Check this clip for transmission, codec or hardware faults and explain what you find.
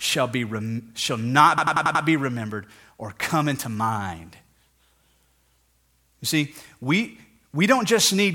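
One hardware fault appears. From 1.58 to 2.04 s, after "shall not" and before "be remembered or come", a system hang loop replays a 92.9 ms fragment five times, a 10.8 Hz machine-gun stutter. The frozen driver left the hardware cycling its ring buffer, which fits a 4096-sample buffer. The exact, identical repeats and the resumption with essentially nothing missing set it apart from packet-loss concealment.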